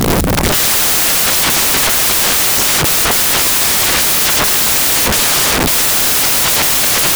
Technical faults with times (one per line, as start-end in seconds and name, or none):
0.00-7.15 samples built from the wrong bytes